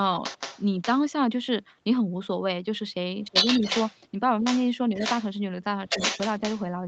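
A second, fainter voice runs under this speech recording from 0.23 to 1.01 s, about 10 dB below the talker, then returns from 3.34 to 3.97 s about 5 dB louder than the talker, from 4.44 to 5.24 s about 5 dB down, and from 5.87 to 6.63 s at roughly equal level. This is likely the other side's voice leaking through: loudspeaker playback reached the microphone and the echo canceller left some of it in. Where the two voices overlap, the talker dips by about 20 dB between 3.23 and 3.62 s and by about 10 dB between 5.86 and 5.96 s, each time losing around a tenth of a second or less. That pattern likely comes from speech suppressed in double talk, with the canceller turning everything down because it could not separate the talker from the echo. The call path's Opus coding limits the audio to 8 kHz.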